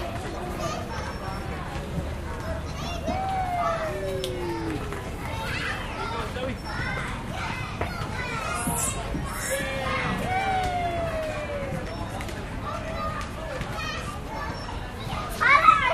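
No technical faults can be heard anywhere in the sound; the signal stays continuous and intact throughout.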